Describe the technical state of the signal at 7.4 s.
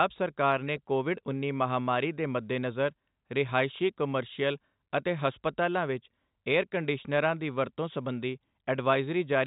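At 7.4 s the speech is intact, with nothing audibly wrong beyond the 4 kHz band limit and faint level-following quantisation hiss of G.711 telephone coding, which is working as intended here.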